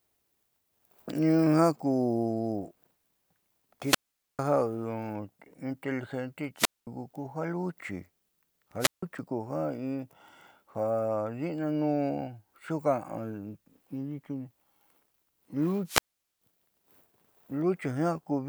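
Each event follows the same pattern: a short swell of hiss, then a hole of near silence, then the speech returning. These are wireless microphone squelch dropouts at 3.82–4.39 s, 6.56–6.87 s, 8.79–9.03 s and 15.85–16.41 s. The mutes last about 444, 217, 158 and 433 ms. Each time the FM radio signal faded far enough that the receiver's squelch shut the output.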